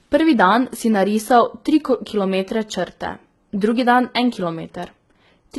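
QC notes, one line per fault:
throughout, HE-AAC compression: gritty, lispy s sounds and a synthetic treble that stops near 11.8 kHz, likely heavy HE-AAC coding near 16 kbps copying lower bands upward.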